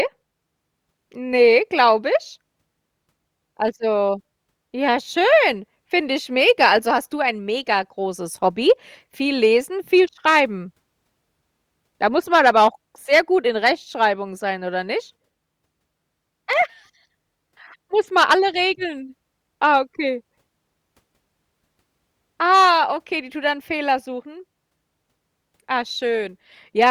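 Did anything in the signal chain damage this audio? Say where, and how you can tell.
Yes. There is a loud pop in the analogue wiring stage, likely from a plug, switch or static discharge. Two sharp pops occur between 16.53 and 16.64 s, rising a few dB above the speech. The speech continues underneath, so a voltage pulse was added to the signal rather than replacing it.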